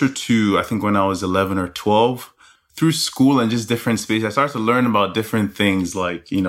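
No technical faults are audible anywhere in the speech recording.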